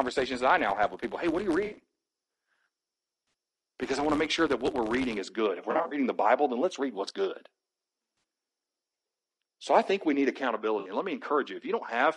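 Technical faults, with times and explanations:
Throughout, low-delay AAC compression: the speech has a rough, grainy texture, with noise filling the gaps between pitch harmonics and a thin, somewhat synthetic top band. This points to AAC-ELD at 32 kbps, likely a video-call path. Its short frames resolve harmonics poorly at this rate, so the damage is plainly audible. It is a steady, even coarseness across the whole clip, not a rhythmic tick or a momentary dropout.
0.00 to 5.19 s, filter restarted on every block: a buzz at about 86 Hz rides on the speech until just before "is good". A filter forgets its state between blocks and starts each from silence, leaving a small transient at every block start. The rate fits 512-sample blocks at 44.1 kHz. Unlike codec grain, this is a regular periodic buzz whose loudness follows the speech level.
1.65, 3.27, 5.71 to 5.97, 8.17 and 10.79 s, AAC frame loss with concealment: brief smeared, phasey patches where lost frames were rebuilt from the last good spectrum. 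Four gaps last about 60 ms each, the last just after "I think we need". At 5.71 s, 140 ms of loss is scattered over 200 ms, with the longest run around 40 ms. Each patch is too short to decay into silence and, unlike the block buzz, is an isolated blur rather than a steady pulse.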